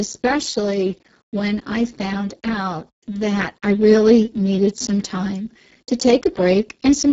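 Throughout, heavy Speex codec damage, from too few excitation bits at a rate near 6 kbps, leaves the speech hoarse and noisy, with nothing above 7.7 kHz.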